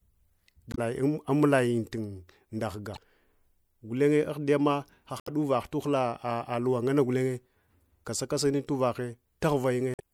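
Damaged data in the compressed stream causes brief glitches at 0.71–0.79, 2.93–2.98, 5.19–5.29 and 9.93–10.0 s, where the decoder misreads corrupted frames and resynchronises.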